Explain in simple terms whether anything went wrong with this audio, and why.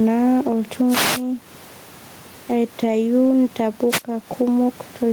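Several things went wrong in this speech recording.

Throughout the clip there is gain pumping, with a large swing in level. The likely cause is a microphone level set much too high, with a fast limiter clamping it down on every loud moment. The room's own background noise is simply part of the recording, so the fault lies in the level control, not the room. Loud and quiet syllables end up squashed to a similar level.

Two wireless microphone noise hits occur, from 0.87 to 1.24 s and again from 3.89 to 4.03 s. Each is a brief swish of static over the voice. The radio signal from the microphone momentarily faded, so the receiver's own hiss rose up. These bursts come and go on their own, unlike the pumping, which follows the loudness of the talker.

At 3.25 s there is a lost packet rebuilt from error correction. A single 20 ms slice of the call went missing, and a rougher backup copy, carried in the next piece of data, filled the hole. 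There is no gap or dropout, just a split second that sounds grainier. That smoothness is what separates it from a plain dropout, and it is far shorter than the radio static.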